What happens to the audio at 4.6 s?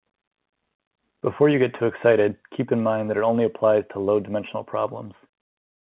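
At 4.6 s the speech runs on intact, with nothing breaking into it beyond the steady narrowband character of G.711 telephone coding that is present throughout.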